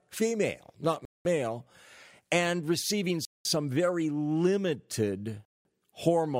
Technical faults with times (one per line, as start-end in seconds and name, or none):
1.05-1.25 gap between chunks
3.25-3.45 gap between chunks
5.45-5.65 gap between chunks